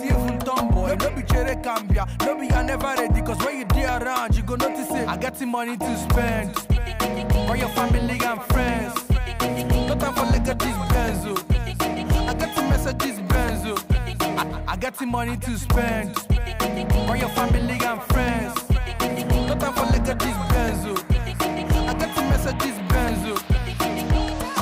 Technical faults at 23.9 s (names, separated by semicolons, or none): none